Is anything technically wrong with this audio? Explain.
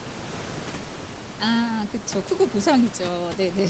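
No, nothing in this speech recording points to a technical fault. The sound stops at about 8 kHz, as expected after a call path, and a low room noise sits about 15 dB below the speech.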